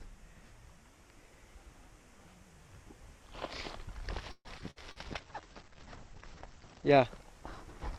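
Choppy, robotic sound with pieces missing from 4.31 to 4.99 s is repeated packet loss: five gaps, the longest 136 ms, patched by extending earlier sound across about a third of that stretch. From 4.92 to 6.96 s the audio turns rough and muffled, a call bitrate drop from 128 to 11 kbps that narrows the bandwidth from 20 kHz to 8 kHz. Between 5.21 and 6.36 s the sound drags, stretched at the same pitch to 92% speed. This is a jitter buffer slow-down adding 98 ms by repeating short pitch periods.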